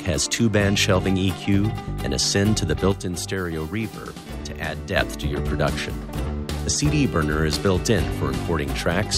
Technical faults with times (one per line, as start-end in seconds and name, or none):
2.92-4.96 sudden gain jump